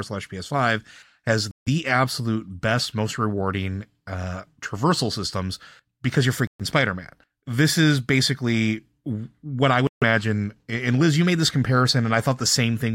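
Speech with three Bluetooth stalls, each a short drop to dead silence: 1.51 to 1.68 s (about 155 ms, just before "absolute best most rewarding"), 6.47 to 6.61 s (about 124 ms, after "traversal systems because you're"), and 9.87 to 10.03 s (about 148 ms, after "is basically what I"). The likely cause is the headphone buffer running dry while interfered packets were resent. Unlike codec packet-loss concealment, the gaps are true silence with no smeared or repeated fragments.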